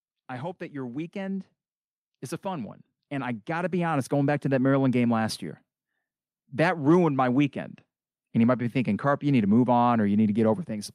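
Automatic gain rising: the level control judged the input too quiet and raised gain, lifting speech and background together by about 4 dB from 0.7 to 1.54 s and about 8 dB from 2.42 to 4.52 s.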